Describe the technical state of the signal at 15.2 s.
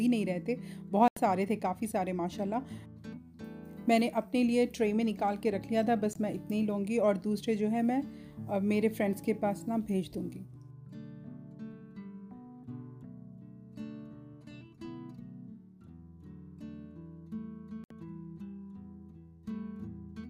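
At 15.2 s the signal runs cleanly, with no dropout, clipping, glitch or other technical fault at that point.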